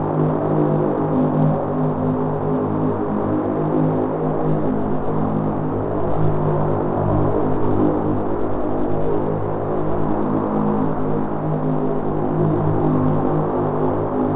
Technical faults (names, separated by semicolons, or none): none